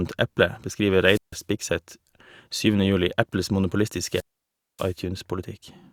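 Wireless microphone squelch dropout interrupts this speech twice: the FM radio link fades until the receiver mutes, giving a rise of hiss, then near silence. It happens from 1.0 to 1.41 s with a 153 ms hole, and from 3.99 to 4.99 s with a 585 ms hole.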